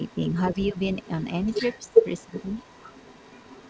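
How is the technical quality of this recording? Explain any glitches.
The recording has two call-related faults: a second voice in the background and brief dips in the main speech. The audio has nothing above 8 kHz, which fits the G.722 call codec.

The other side's voice leaks through from 0 to 0.32 s, 0.59 to 1.25 s, and 1.42 s to the end. It is likely residual loudspeaker echo the canceller missed, rising from about 25 dB to about 15 dB below the speech. A separate, fainter voice marks it as leaked echo rather than noise.

Speech is suppressed in double talk at 0.68–0.79 s, 1.83–2.04 s and 2.26–2.33 s, with drops up to about 20 dB. The likely cause is the canceller ducking both voices at once. Unlike a network dropout, each dip coincides with the leaked voice.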